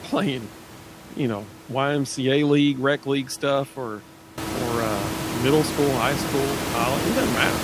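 This is a speech recording with nothing technically wrong with it.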